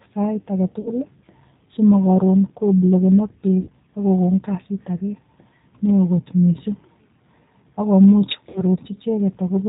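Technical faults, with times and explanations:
Throughout: G.729 codec damage, plainly audible. The speech is band-limited to below 4 kHz and has a rough, slightly synthetic texture. This fits G.729A at 8 kbit/s, which rebuilds each 10 ms frame from a vocal tract filter, a pitch predictor and a sparse set of pulses rather than the actual waveform.
0.81–0.90 s, 3.61–3.69 s and 8.49–8.63 s: VoIP packet loss concealed by the speech codec. Around 40 ms of speech is missing at the first gap, and about 60 ms at the second (between "simokorun koblokenok" and "ak kokon") and the third (after "ak komuch"). The decoder fills these gaps by extending the last pitch and filter state, producing a buzzy tone or coloured noise that fades. The speech stays weak for a short while after each gap because each frame is built on the one before.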